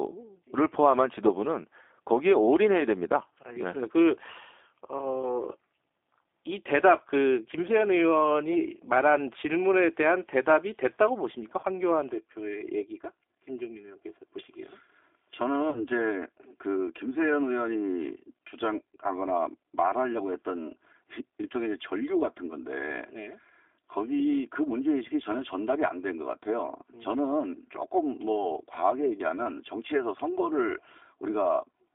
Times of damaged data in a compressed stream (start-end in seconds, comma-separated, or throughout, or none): none